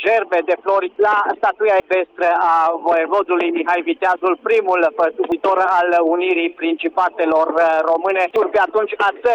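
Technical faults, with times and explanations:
0.0 to 2.53 s, channel delay (comb filtering): one channel trails the other by a couple of samples, a tiny fraction of a millisecond, so summing to mono cancels the top end, with the first notch up around 10 kHz. It sounds a bit dull until it clears.
1.8, 5.32 and 8.36 s, dropped buffer (overrun): at each point the sound jumps forward, no gap, as if a chunk went missing, about 70 ms at the first and last and about 100 ms in the middle. Likely the software didn't read its samples before the hardware wrote over them, so the two ends got spliced.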